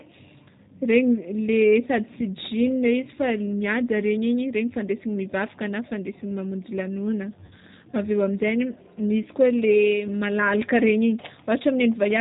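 From the start the speech goes through the G.729 codec at 8 kbit/s. It rebuilds the voice from a filter and a few pulses, cuts everything above 4 kHz, and leaves it plainly rough and synthetic. At 7.46 s about 50 ms of packets go missing, and VoIP packet loss concealment by the speech codec stretches the last sound into a fading buzzy tone or coloured noise until 7.53 s.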